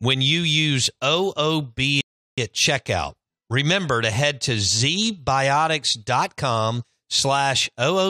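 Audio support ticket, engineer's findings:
Rebuffering stall at 2.01 s, speech drops to silence until 2.38 s, then picks up exactly where it left off. Player buffer ran dry, so playback paused waiting on the download. Nothing lost, just about 0.37 s of dead air added.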